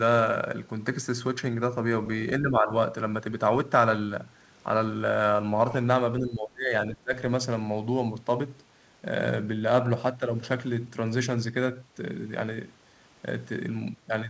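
An echo canceller likely mistook overlapping talk for its own echo and turned the speech down, speech suppressed in double talk. From 2.4 to 2.71 s the level dips by roughly 10 dB. From 6.19 to 7.14 s it sinks deeper, around 20 dB, for most of that span.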